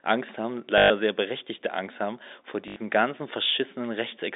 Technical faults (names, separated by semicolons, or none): packet loss with last packet repeated